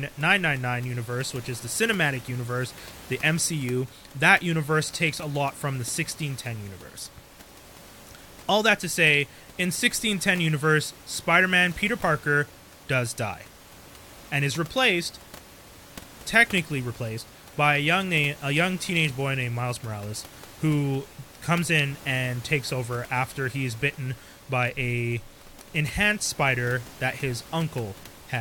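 Nothing in this speech recording points to a technical problem; the only thing underneath it is the room's own background noise, sitting about 21 dB below the speech.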